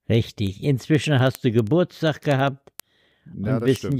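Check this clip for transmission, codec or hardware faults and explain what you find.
There's one fault here, word clock ticks. From 0.15 to 3.92 s there's a sharp tick roughly every 70 ms, around fifty in all. An unlocked receiver clock a few hundred ppm off slips one sample each time.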